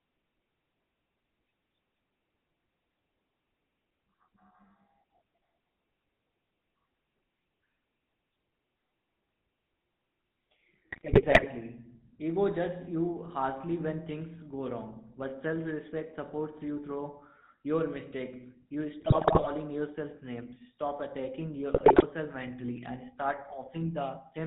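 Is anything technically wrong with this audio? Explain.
Yes. The whole clip has passed through the GSM full-rate codec, consistent with its 13 kbps stream. The codec reduces the speech to a vocal-tract filter driven by a sparse, regularly spaced pulse excitation that keeps only one sample in three, and it discards everything above 4 kHz. The result is plainly audible throughout: a dull, band-limited voice with a buzzy, gravelly roughness layered over it.

GSM bit errors also occur in three bursts: 10.90 to 11.47 s, 19.00 to 19.49 s just before "yourself names", and 21.74 to 22.05 s just before "mentally and start". Here corrupted bits reached the decoder, in amounts that point to a few percent of the bits being flipped, so the filter, pitch and gain values decoded for those frames were wrong. The spectrum twists and the level jumps from frame to frame, and the speech breaks into squawks, pops and gargling for up to about half a second each time.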